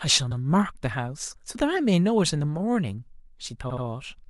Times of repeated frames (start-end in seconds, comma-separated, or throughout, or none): 0.31-0.40, 3.69-3.83